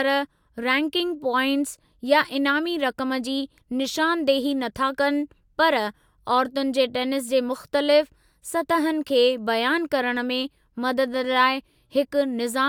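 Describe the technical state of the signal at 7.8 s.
At 7.8 s the speech signal is intact, with no audible technical fault at that moment.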